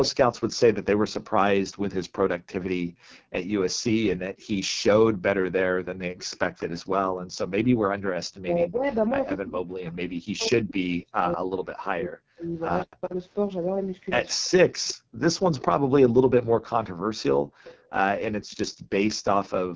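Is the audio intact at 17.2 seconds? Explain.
No. The background is gated by the echo canceller between 14.77 s and the end at 19.76 s, around two seconds in all. While the far end plays, the canceller pulls the microphone down by up to about 40 dB, so the room sound drops out and returns. Unlike a network dropout, it is silence in the room, not a gap in the stream.

The AMR wideband (HD Voice) codec also damages the whole clip, heavily. It models the voice with pulses through a vocal tract filter and invents the top band from shaped noise. The sound is rough and raspy, which fits the 6.6 kbit/s mode. That is steady grit, not the watery swirl of a lossy music codec.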